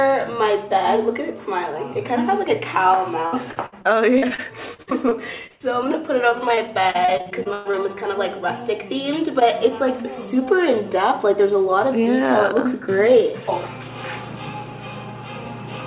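From 3.26 to 5.87 s, and again from 6.29 to 7.75 s, the audio turns choppy, with bits missing. This is repeated packet loss: each short hole is patched by extending the previous sound, the longest lasting about 80 ms and 120 ms.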